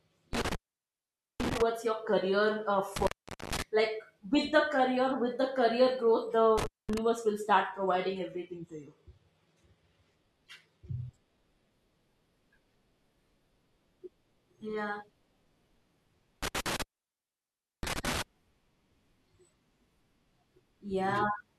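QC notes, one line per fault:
0.33–1.62 s, 2.96–3.62 s, 6.58–6.98 s, 16.43–18.22 s, intermittent contact: the signal path opens briefly, for about 0.85 s, 0.45 s, 0.22 s and 1.01 s, with crackle at each break and make. The first dropout ends just before "your career uh", and the third ends just before "will start".
7.70–11.70 s, adaptive stream at a lower bitrate: just after "will start", codec artefacts suddenly rise, with no gap. This fits the stream falling from 96 kbit/s AAC-LC to 16 kbit/s HE-AAC for 4 s, then recovering.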